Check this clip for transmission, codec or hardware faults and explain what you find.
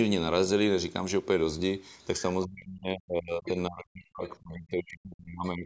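The clip has two faults tied to echo cancellation in a call, both from 2.45 s onward.

From 2.45 s to the end, the speech is suppressed in double talk. The level dips and cuts out in pieces, at its deepest about 40 dB down, over roughly three seconds. The likely cause is that the echo canceller, hearing both ends talk at once, could not tell the local talker from loudspeaker echo and turned everything down. On the waveform the envelope collapses into thin, broken patches. On the spectrogram the harmonics fade and the upper band thins out, beneath the normal call-processing ceiling at 8 kHz.

From 3.45 s to 3.5 s, the other side's voice leaks through. A brief fragment of a second voice appears, roughly 15 dB below the speech. It is most likely far-end audio from the loudspeaker that the echo canceller failed to remove from the microphone signal. It sounds like a short blip of someone else. 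On the spectrogram it shows as a faint, narrow smear of harmonic energy inside the suppressed stretch. On the waveform it is a tiny burst about 50 ms long.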